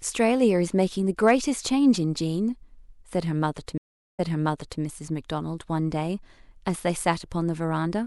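It's a speech clip with two problems. First, some brief hard clipping from 1.27 to 1.31 s: a peak pushes about 1 dB past what the stage can pass, so its top gets sliced flat, and you hear a quick crackle as those flat edges throw up high harmonics. Then at 3.78 s there's a stream reconnect: the audio cuts out for about 0.41 s while the connection drops and comes back, and playback picks up 0.63 s earlier than where it left off, so a short stretch repeats as the fresh decoder eases in. The whole disturbance runs until about 4.81 s.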